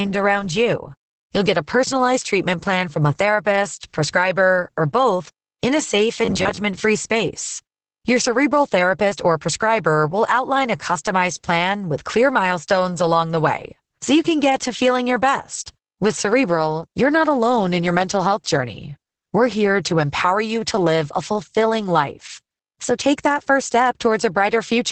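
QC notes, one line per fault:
Throughout: Opus voice compression. Nothing above 8.7 kHz, and speech sounds muffled, hoarse and slightly robotic, which fits SILK coding at around 10 kbps.
6.25–6.58 s: robotic sound from repeated short buffers. A rigid metallic buzz at 93.8 Hz, likely from repeating roughly 11 ms chunks, covering about half this span.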